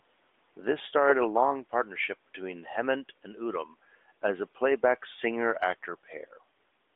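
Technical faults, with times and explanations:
Nothing stood out on listening, beyond the narrow bandwidth of the mobile line this speech was carried over.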